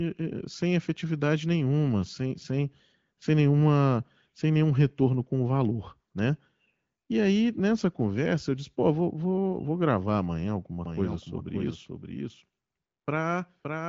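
Doubled audio track from 10.85 s to the end: a second copy enters abruptly about half a second behind and about 5 dB quieter, likely from a lagging capture path.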